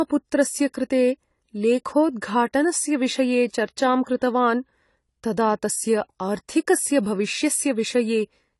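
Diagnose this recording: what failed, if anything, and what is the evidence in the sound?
Codec stage: AAC compression, likely near 32 kbps. Throughout, nothing reaches above 11.5 kHz, and coarse quantisation leaves the speech dull and smeared.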